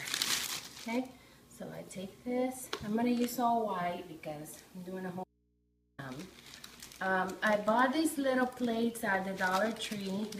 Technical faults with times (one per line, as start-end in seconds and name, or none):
5.24-5.98 audio dropout to a faint residue